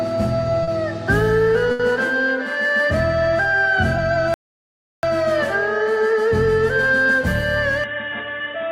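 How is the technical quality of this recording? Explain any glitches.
The recording has four audible glitches.

From 0.63 to 0.70 s there's a short concealed packet loss. About 40 ms never arrived in time, so the decoder extended the previous sound and blended back, leaving a quick smear.

From 1.71 to 1.82 s there's a burst of packet loss. The receiver had to cover 80 ms by stretching the last sound and fading it, which gives a held buzz or a dying hiss before the audio picks up further on.

From 4.34 to 5.03 s the sound just stops for about 0.69 s, then carries on. That's most likely a playback stall, with the player running dry or its thread getting blocked.

From 7.84 s to the end, the level drops by a few dB and a new background noise floor appears, sitting well below the signal. There's no gap at the changeover. This is likely the input switching to a poorer device partway through.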